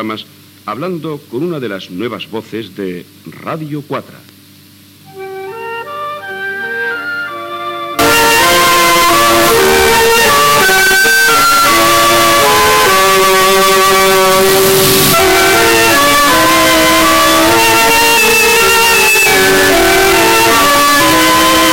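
From 7.99 s to the end, the sound turns nearly square at an almost fixed, high level. It is very loud and harsh, and quiet background noise matches the main sound. Pitch stays traceable. The likely cause is float read as integer: 32-bit float samples taken as 32-bit integers, so sign and exponent bits set the level.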